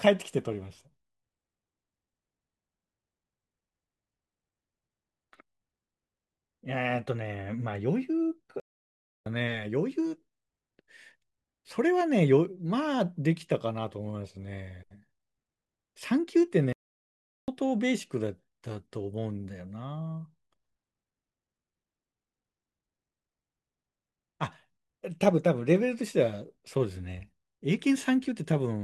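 At 8.60 s the speech cuts out for about 0.66 s, and at 16.73 s it drops again for about 0.75 s, resuming at 17.48 s. These are playback stalls: the output goes silent mid-flow, likely because the player ran short of data or its thread was blocked.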